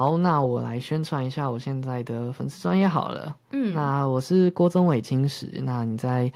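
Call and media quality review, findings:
No faults found: the speech signal is continuous and stable, with nothing on the path calling for action.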